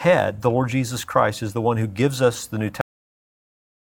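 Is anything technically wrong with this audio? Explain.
Yes, it has a cut-off end. At 2.81 s the speech stops dead mid-sound and drops straight to digital silence for the remaining second or so, with no natural decay. The final stretch of audio was never written out, so playback simply runs off the edge.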